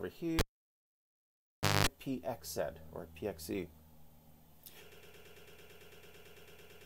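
At 0.39 s a cable pulled and plugged in: a pop, then about 1.43 s of near silence, then roughly 0.21 s of 50 Hz mains buzz as the plug tip makes contact, and a second pop at 1.87 s. The waveform shows a spike, a flat gap and a buzzing stretch, and the spectrogram shows 50 Hz harmonic lines.

From 4.92 s to the end a broken-record loop sets in. A 111 ms fragment repeats back to back seventeen times, likely because the player or stream stalled and kept resending its last buffer. The waveform shows identical tiled blocks and the spectrogram shows a repeating pattern every 0.11 s.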